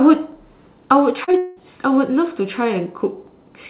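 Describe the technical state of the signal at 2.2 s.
At 2.2 s the signal is intact, with no dropout, glitch or distortion, just the narrowband call-path sound with nothing above 4 kHz that points to a G.711-style telephone codec.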